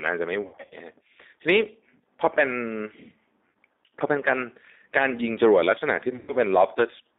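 The whole clip runs through a G.729 codec, and the damage is plainly audible: the speech sits in a narrow band from about 250 Hz to 3.7 kHz and has that rough, slightly synthetic quality you get when a low-rate model rebuilds the voice, which fits 8 kbit/s G.729A.

Then there's VoIP packet loss concealed by the speech codec, three times. From 0.42 to 0.75 s the gaps are scattered, and the decoder keeps stretching its last pitch into a fading buzz, with the worst single dropout around 60 ms. A short hole at 3.49 to 3.55 s follows. From 6.14 to 6.34 s there's one long run of about 120 ms, where the voice smears into a dying tone and stays weak as it recovers.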